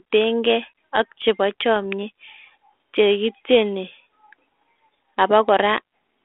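At 1.76 s, just after "keey ak chebo", bit errors on an ADPCM link produce a brief rough pop. A low error rate of around 0.2 percent corrupts the coded differences. The decoder's step size and predictor drift, so the disturbance rings on for about 10 ms. The narrowband ADPCM coding underneath fits G.726 at 32 kbit/s.

At 5.23 s a single sharp click appears as a thin vertical line across the spectrum. The likely cause is dropped samples, roughly one sample missing, so the waveform jumps abruptly to a later value without removing any audible sound.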